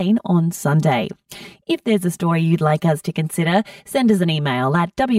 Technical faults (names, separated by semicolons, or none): channel delay (comb filtering)